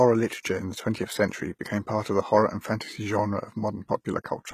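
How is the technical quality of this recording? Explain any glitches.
The recording has one clear problem. Throughout the speech, the treble sounds gritty and metallic, and s sounds turn lispy. The likely cause is HE-AAC compression at a low bitrate, perhaps near 20 kbps. Only the lower spectrum is coded. The highs are rebuilt from copied lower bands, so their harmonics don't line up.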